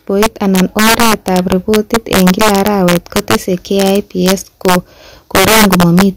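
Throughout the speech, integer overflow cracks out on the loudest peaks. The signal runs about 7 dB too hot, and around 2 percent of samples exceed the integer limit. Instead of clipping, they wrap to the opposite extreme, producing harsh, violent snaps far sharper than ordinary distortion.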